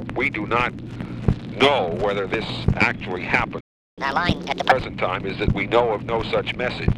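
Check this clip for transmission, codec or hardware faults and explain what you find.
There's a playback hiccup around the four-second mark: a stall followed straight away by a sped-up recovery.

At 3.60 s the sound cuts out mid-flow and stays silent until 3.98 s, a gap of about 0.37 s. That's a playback stall: the output went dead, likely because the player ran dry of buffered data or its thread got held up, and it resumes from where it left off.

From 3.98 s to 4.72 s you get catch-up at higher speed. The player chews through its backlog at 1.5 times normal rate by resampling, so everything runs fast and jumps up about seven semitones, then snaps back to normal pitch and tempo once it's caught up.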